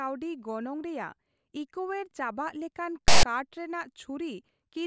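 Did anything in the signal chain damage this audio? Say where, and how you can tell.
Yes. The fault sits in storage and playback: a block of text tags in the file was handed to the decoder as if it were sample data, so file tags were played as audio. From 3.08 to 3.23 s the speech gives way to a loud, harsh rasp about 0.15 s long, starting and stopping with hard edges. Because character codes cluster in a narrow range of byte values, the waveform sits lopsided, offset to one side of zero, rather than sounding like even static.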